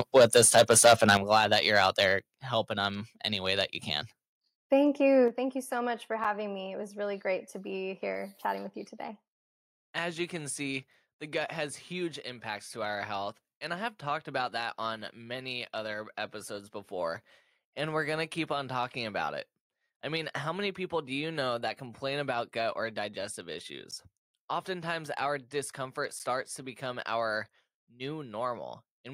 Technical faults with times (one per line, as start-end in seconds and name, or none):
0.00-2.03 microphone overload
0.18 microphone volume stepped down
1.17 microphone volume stepped down
2.19 microphone volume stepped down
5.28 microphone volume stepped down
23.91 block of digital silence